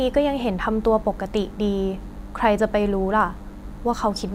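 DECT cordless phone buzz throughout: a nearby handset or base emits radio bursts at 100 Hz, rectified by the audio circuit, leaving a thin harmonic buzz well below the speech.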